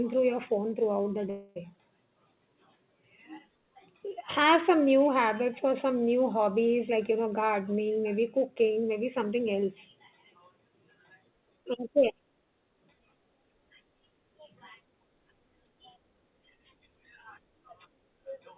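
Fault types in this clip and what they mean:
Call audio freeze: packets were held up in transit and the jitter buffer ran dry, likely from a network stall. From 1.3 to 1.58 s the receiver stretches the last sound into a fading buzz or hiss for about 0.26 s, then resumes where it stopped, adding delay with nothing lost.
Jitter buffer speed-up: with surplus audio queued, the receiver cuts short pitch-period pieces repeatedly to shrink the delay. Between 6.88 and 9.33 s the speech plays at 111% speed, roughly 0.3 s trimmed, sounding hurried at unchanged pitch.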